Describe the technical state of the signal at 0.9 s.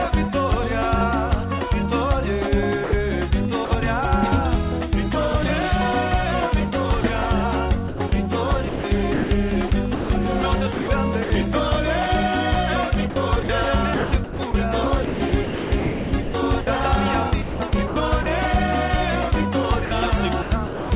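At 0.9 s the audio is intact, with no fault present, only the narrowband character of the call path, which leaves nothing above 4 kHz.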